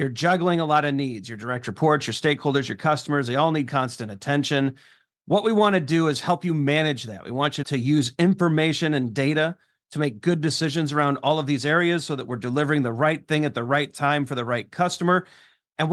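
No technical faults can be heard anywhere in the recording; the signal holds steady and continuous throughout.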